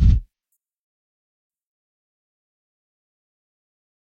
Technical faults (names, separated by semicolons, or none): compressed frames skipped